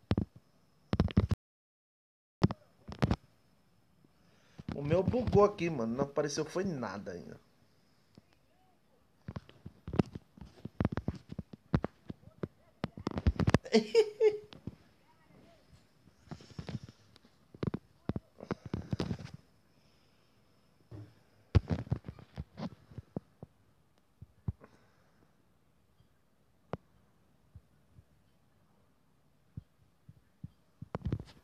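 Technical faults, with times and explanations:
1.34–2.42 s, audio dropout to silence: the sound cuts off mid-flow and comes back about 1.08 s later, with silence in between and not even room tone left. That points to the input likely getting lost for a moment while recording kept running.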